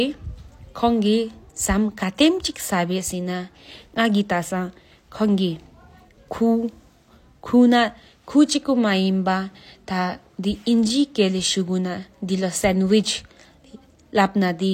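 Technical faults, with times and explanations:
0.49 s and 1.64 s, dropped samples. Each time the speech gives a single sharp click. The likely cause is a tiny gap in the stream, a fraction of a millisecond. The waveform jumps straight to a later value. That sudden step sounds as a click, not as missing sound.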